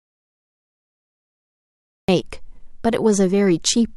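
From the start until about 2.09 s the speech is an audio dropout to silence: dead silence with no room tone, unlike a pause, likely from lost input.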